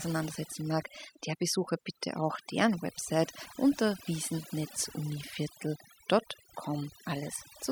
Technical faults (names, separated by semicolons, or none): overdone noise removal